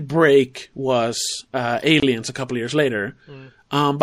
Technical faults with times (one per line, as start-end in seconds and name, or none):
0.00-4.02 MP3 compression
2.00-2.02 gap at a join of encoded pieces